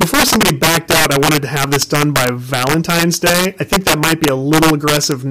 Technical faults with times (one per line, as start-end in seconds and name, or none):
0.00-5.30 integer overflow